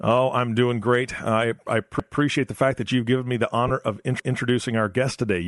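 The speech runs throughout through a low-rate transform codec, likely Bluetooth LC3 compression at a setting that fits about 48 kbps with 7.5 ms frames. Its upper spectrum is thinned and noise-filled, so the voice carries a plainly audible breathy, grainy edge.

At 2.00 s, overlapping chunks appear: the audio is handled in 2 s chunks, and each new chunk begins 200 ms before the previous one ended. That 200 ms stretch plays twice, up to 2.20 s, and is heard as a stutter at the join.

From 3.68 to 3.71 s, lost LE Audio frames leave a 22.5 ms hole, which fits three 7.5 ms frames. The decoder reuses the last spectrum with scrambled signs, so the sound briefly smears into a noisy blur.

At 4.20 s the overlapping chunks recur with the same 2 s chunks, with another 200 ms section repeated through 4.40 s and the same stutter.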